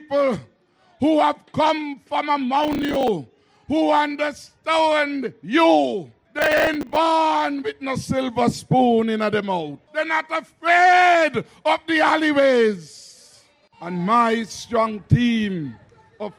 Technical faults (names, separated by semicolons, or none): processor overload crackle